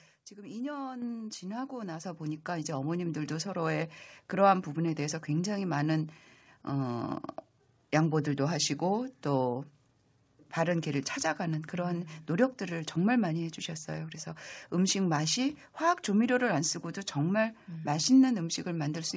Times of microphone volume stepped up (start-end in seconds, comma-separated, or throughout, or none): 1.02, 2.04, 3.06